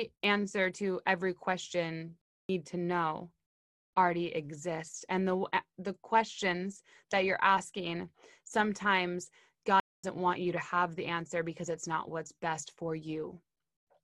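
Playback stall at 2.21 s, after "answer to every question": the speech cuts to silence for 0.28 s. Again at 9.80 s, after "that you're asking sometimes", for 0.24 s. The player likely ran out of data.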